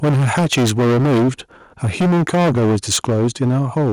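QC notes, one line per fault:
0.03–1.29 s, microphone overload: input gain was likely set too high, driving peaks about 13 dB past the converter's limit; a large share of samples are flattened, giving harsh crackle.
0.04 s, microphone volume stepped down: the input level likely got cut in one step of about 2 dB, so speech and background drop together, though distortion continues.
1.83–3.92 s, microphone overload: input gain was likely pushed about 14 dB past the converter's ceiling again; roughly a fifth of samples are squared off, roughening the loudest syllables.
3.1 s, microphone volume stepped down: a further one-step cut of about 3 dB, likely by automatic gain control, causes a sudden level drop while clipping persists.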